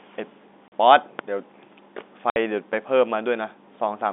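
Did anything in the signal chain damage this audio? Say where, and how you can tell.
Yes. Packet loss filled with silence appears at 0.68 to 0.72 s and again at 2.30 to 2.36 s, a network-stage fault. The speech drops to dead silence for 40 ms and then 60 ms, with abrupt edges. Both gaps are whole multiples of 20 ms, which points to 20 ms packets, two lost in the first hole and three in the second. The receiver inserted silence instead of concealing the missing audio.

A loud pop occurs at 1.19 to 1.22 s and another at 2.73 to 2.76 s, each a single sharp impulse sitting on top of the speech, which carries on underneath. The first peaks roughly 15 dB above the speech and the second roughly 10 dB above it. Each lasts under 30 ms, consistent with a brief voltage step being shaped by the downstream circuitry. The likely source is the analogue wiring or a driver glitch: a plug, switch or static discharge injecting a transient. 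The G.711 telephone coding band, roughly 250 Hz to 3.6 kHz, plays no part in either fault.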